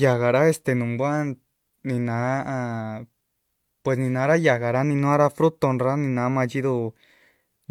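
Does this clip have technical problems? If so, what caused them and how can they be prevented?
No, there are no technical faults to report in this speech recording, so there is nothing here that needs preventing.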